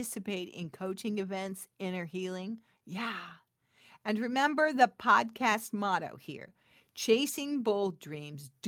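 Speech here, and the sender's clock is running about 1.5% slow against the receiver's, a classic case of clock drift between sender and receiver. The jitter buffer keeps running short, so playback has to stretch to stay fed. The result is repeated timing corrections from about 0.2 s to the end at 8.67 s. The receiver keeps repeating short slivers, adding roughly 150 ms in total. The unevenly spaced tiny edits leave the stretch running at about 98% speed.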